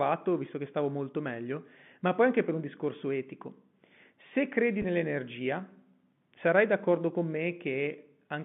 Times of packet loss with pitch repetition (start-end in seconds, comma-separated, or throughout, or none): 4.82-4.84